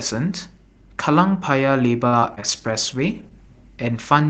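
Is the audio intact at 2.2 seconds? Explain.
No. At 2.2 seconds the sound is inside a stretch of repeated packet loss (robotic sound) running from 2.07 to 2.58 s. Four separate gaps fall in that half second. The longest is 49 ms, and about a quarter of the span is concealed by stretching the last good sound over the holes. The result is choppy, with pieces missing. A single dropout would leave one isolated hole. Here the gaps recur in quick succession.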